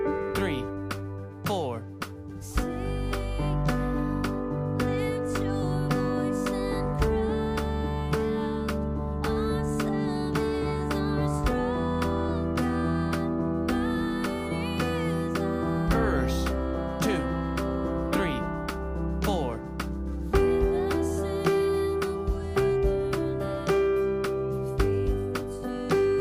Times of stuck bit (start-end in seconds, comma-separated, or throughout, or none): none